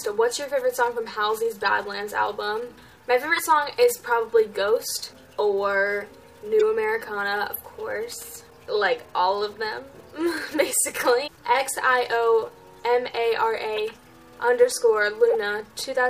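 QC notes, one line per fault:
1.61, 3.36–3.39, 6.59–6.62, 13.76–13.79, 15.30 s corrupt frame decoded: damaged compressed data misplaces energy in frequency, giving brief chirps or noise bursts lasting one to three frames, unlike a single-sample click.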